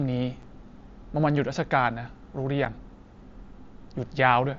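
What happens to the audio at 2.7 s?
At 2.65 s, unconcealed Bluetooth headset packet loss leaves a 7.5 ms hole in the speech, consistent with a single dropped packet that was replaced by silence.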